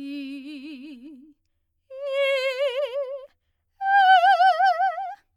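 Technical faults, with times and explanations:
There are no technical faults to give times or explanations for in this music.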